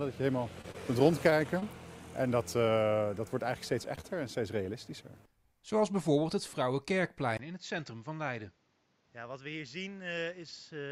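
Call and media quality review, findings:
Short concealed packet loss at 0.61, 0.72, 1.60, 3.96 and 4.01 s. Brief smears or wobbles. Jitter buffer and decoder concealment. About 20 ms of audio missing each time, bridged by extending the preceding sound, then crossfaded back.

Short stall from a late packet at 1.30 s. One sound held about 19 ms too long, slight dip. Jitter buffer underrun. Nothing lost. Playout resumed where it stopped, with delay up by about 19 ms.

Input switched to a poorer device at 7.37 s, through to the end. About 20 ms of silence at the switch. Then duller sound with nothing above 7.6 kHz, roughly 5 dB quieter, and a new noise floor around 30 dB down. Likely capture-device or profile change.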